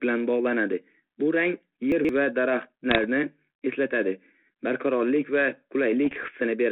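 Chunks out of order occur from 1.92 to 2.09 s. A block of sound about 43 ms long was delivered or written late and plays after the material that should have followed it, displaced by roughly three chunk lengths. Nothing is missing, but the sequence is scrambled, and each of the three mismatched joins leaves a hard edge. The result is a brief jumbled stutter.

Bit errors on an ADPCM link appear from 2.90 to 2.99 s and again, longer, from 6.06 to 6.29 s. A small fraction of a percent of the bits were flipped. Each wrong bit also throws off the decoder's adaptive step size and prediction, so the damage lingers for several milliseconds instead of staying a single-sample glitch. Both stretches are heard as pops and rough, gritty bursts with short jumps in level, set against a telephone band of about 200 Hz to 3.5 kHz that fits 32 kbit/s G.726.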